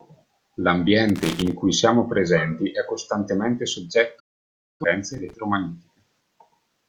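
From 1.09 to 1.52 s, just before "cui siamo presenti è", there is loose connector crackle: a worn contact making and breaking chops the speech into an irregular scratchy burst. It shows as ragged spikes on the waveform and scattered broadband vertical streaks on a spectrogram. A shorter burst recurs from 5.14 to 5.34 s.

Right after "siamo presenti è costantemente", a digital broadcast dropout runs from 4.20 to 4.85 s. The receiver lost valid frames and muted with an 8 ms fade. About 0.6 s of programme vanishes, which fits roughly 14 lost frames. It appears as a flat line on the waveform and a blank vertical gap on a spectrogram.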